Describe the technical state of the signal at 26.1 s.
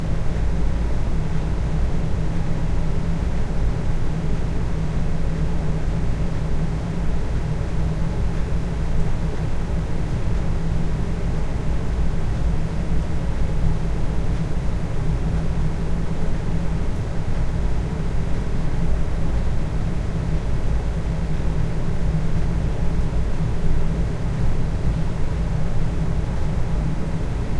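The signal at 26.1 s is intact, with no fault audible at that moment.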